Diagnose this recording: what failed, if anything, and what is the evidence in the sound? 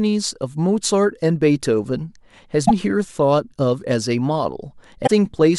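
The codec stage failed: damaged data in a compressed stream. The speech breaks up briefly at 2.65 to 2.71 s and again at 5.03 to 5.10 s. In both spots corrupted frames threw the decoder out of sync until it found the next clean frame header.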